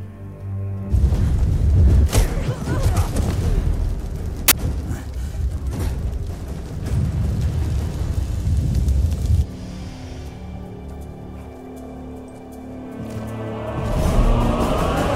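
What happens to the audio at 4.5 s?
A sudden, hard-edged burst of very loud white noise cuts in from 4.48 to 4.52 s. This is file tags played as audio: an embedded cover picture's compressed bytes were read as samples, and their near-random values come out as loud static.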